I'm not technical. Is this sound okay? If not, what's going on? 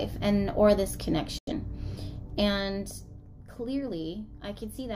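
No. There's a digital broadcast dropout from 1.38 to 1.52 s. The receiver briefly lost clean data and muted itself, so the sound snaps to silence for about a tenth of a second, consistent with two lost frames, then returns. Whatever played in that gap is gone.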